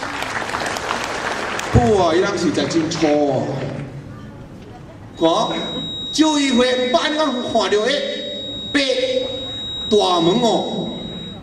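At 5.12 s a feedback whistle appears and lasts to the end of the clip, at 11.43 s. It is a thin, steady tone at 3.8 kHz. It sits roughly 10 dB below the main sound and swells and fades slowly in level. The likely cause is a loudspeaker-to-microphone loop held just at the edge of feedback. One frequency keeps ringing around that loop. It never builds into a runaway howl.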